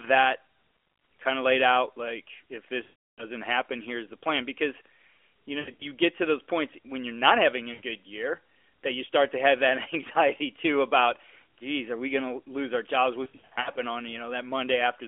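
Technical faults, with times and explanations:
2.84 to 3.26 s, lost AMR speech frames: radio errors corrupted 340 ms of frames, so the decoder kept repeating the last good pitch and vocal-tract settings with falling gain. The audio smears, fades to silence, and returns weak.
5.60 to 5.85 s, lost AMR speech frames: between "you know" and "get to those points", 140 ms is lost across 200 ms, with runs up to 80 ms. This gives choppy warbling dips.
7.74 to 7.81 s, lost AMR speech frames: a 60 ms gap between "you're not having a" and "year that you start" causes a brief dip.
13.24 to 13.80 s, lost AMR speech frames: after "lose our jobs", 280 ms is lost across 520 ms, with runs up to 60 ms. The narrowband sound, which fits 12.2 kbps AMR, stutters and roughens.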